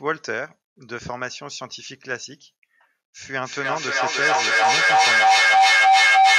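From 3.43 s to the end of the clip, a feedback howl takes over the speech. The sound is leaking from a loudspeaker back into a microphone on the same call, and each trip round that loop adds level, so the repeats build rather than fade. They narrow to a ringing tone around 700 Hz, with the repeats coming roughly every third of a second, and it peaks about 13 dB above the speech. Ordinary echo decays with each repeat, and a mains hum holds steady, while this tone keeps swelling.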